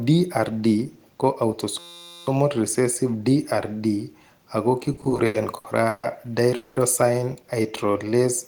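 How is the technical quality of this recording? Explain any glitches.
The recording has four glitches. Each one is described below in order.

From 1.79 to 2.27 s there is a system hang loop. The computer or driver froze, but the sound hardware kept replaying its ring buffer. One 5.8 ms piece repeats dozens of times. That fits a 256-sample buffer. At a 172 Hz repeat rate it is heard as a steady, pitched buzz. Little or no audio is lost around it.

From 4.93 to 6.05 s there is a run of repeated stalls, or stutter. Packets arrived late again and again, and the jitter buffer emptied ten times. Each time, the receiver stretched the last sound to cover the wait. The longest wait was 150 ms. About 360 ms of filler covers roughly a third of the span. Nothing is missing, but the speech drags and stutters.

From 6.55 to 6.78 s there is a call audio freeze. The sound hangs on as a continued buzz or hiss for about 210 ms, with no drop to silence. 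The speech then resumes exactly where it stopped. The likely cause is packets held up in transit, which emptied the jitter buffer. This adds a 210 ms delay rather than removing any speech.

From 7.63 to 8.22 s there is a jitter buffer slow-down. The receiver was rebuilding its reserve by repeating single pitch periods and bits of pauses. This adds 73 ms to the passage. Playback runs at about 89% speed with the pitch unchanged. Sounds come out drawn-out.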